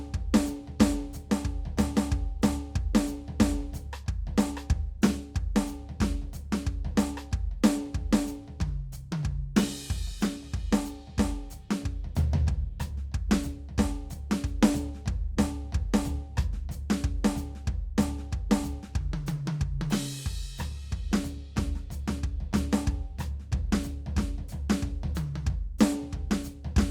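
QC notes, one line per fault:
No faults heard in this music.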